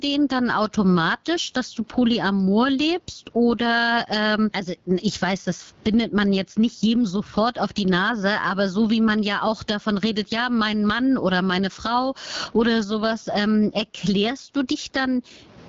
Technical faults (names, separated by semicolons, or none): gain pumping; AMR wideband (HD Voice) codec